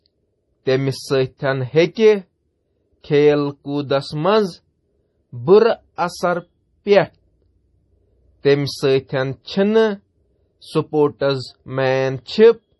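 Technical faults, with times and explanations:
Throughout, MP3 compression: the speech has nothing above about 11.5 kHz, and the damage is heavy, with a watery, swirling quality where weak frequency components flicker in and out between frames and sibilants turn metallic. This likely comes from an MP3 encode at a low bitrate, around 32 kbps, where the encoder runs short of bits, cuts the treble at a fixed frequency and discards the quieter spectral lines to stay within budget.
1.94 to 1.96 s, pre-echo: a short burst of hiss, about 21 ms long, runs just ahead of a sharp onset, and the attack itself sounds softened and smeared rather than crisp. The transform codec spreads its quantisation noise across the whole block, so noise sized for the loud attack late in that block also fills the quiet moment before it, where nothing masks it.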